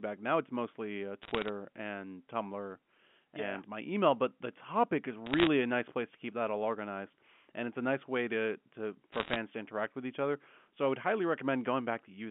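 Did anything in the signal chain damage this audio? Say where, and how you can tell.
Yes, in the digital transmission stage: bit errors on a digital phone line, in three bursts at 1.23–1.49 s, 5.26–5.47 s and 9.12–9.36 s. Each burst is a crackle of sharp single-sample ticks over speech that stays intact, band-limited to the telephone range of 150 Hz to 3.4 kHz. At an error rate of around 0.7 to 1 bit in a hundred, flipped sign or high-order bits in the A-law samples throw individual values far off. Packet loss would instead leave gaps or smeared concealment, not isolated clicks.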